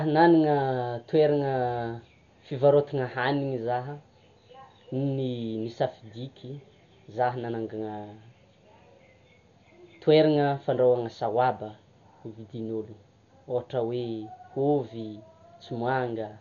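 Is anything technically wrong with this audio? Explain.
Yes. Across the whole clip the speech sounds dull and boxed in, with nothing above 7 kHz and a rough, fluttering grain around tonal parts. That's likely heavy Dolby Digital compression, which fits a 48 kbps stream: the encoder narrowed the band and left many frequency lines without mantissa bits, so the decoder filled them with dither noise.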